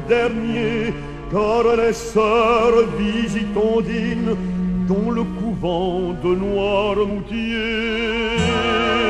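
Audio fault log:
0.51–0.56 s, 4.09–4.14 s and 7.06–7.11 s: damaged data in a compressed stream. Each is a brief glitch of about 45 to 55 ms where corrupted bytes made the decoder misread frames, lose sync and hunt for the next valid frame header. Unlike a plain dropout or a single-sample click, these bursts come from the decoder losing frame sync before clean playback returns.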